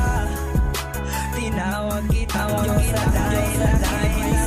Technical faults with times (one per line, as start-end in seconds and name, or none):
2.34-4.46 doubled audio track
4.12-4.15 AAC frame loss with concealment